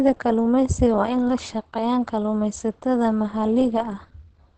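Right through the speech there's plainly audible Opus compression, likely at a low rate in its speech mode: nothing above 8.7 kHz, and a muffled, hoarse edge, which fits about 16 kbps.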